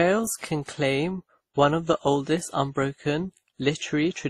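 Throughout the speech, the sound carries two layers of coding damage at once. The artefacts of both codecs are heard together. The top end stops near 19 kHz. This is likely transcoding between lossy codecs, with the audio coded once and then coded again by Opus. Each pass at a low rate, roughly 32 kbit/s, discards detail. The second codec spends its bits on the first one's artefacts.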